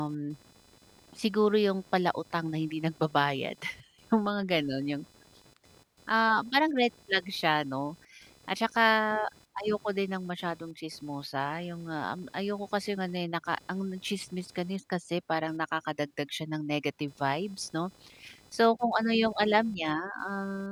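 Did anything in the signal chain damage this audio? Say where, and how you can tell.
Yes. Computer activity noise in the analogue wiring: a buzz pulsing around 500 Hz, about 30 dB under the speech, throughout, as computer load shifts the shared ground.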